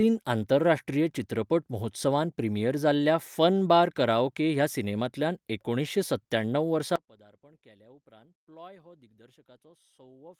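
A speech clip with an audio dropout to a faint residue: right after "सत्त्याणव वर्सा", at 6.96 s, the signal collapses abruptly to a faint residue roughly 25 dB down that lasts to the end. That sudden drop, not a taper, rules out a fade. The lingering residue, likely from a live path past the break, rules out a pause.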